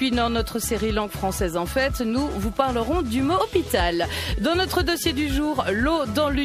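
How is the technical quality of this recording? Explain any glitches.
There is one audible glitch, from 3.37 to 3.41 s: a burst of damaged data in the compressed stream. Corrupted bytes in the encoded frames there made the decoder misread them and lose sync until it found the next valid frame header, producing a brief glitch about 40 ms long.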